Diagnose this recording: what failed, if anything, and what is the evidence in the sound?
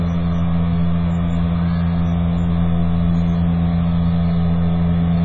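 Codec stage, most likely AAC compression run at a very low bitrate. Across the whole clip there's nothing above 7.5 kHz, so the top end is just gone and everything sounds dull and a bit smeared. The damage is heavy, with that warbly, fizzy texture you get when the encoder starves bands and patches them over. A hard lowpass plus that much smear points to something down around 12 kbps on AAC-LC.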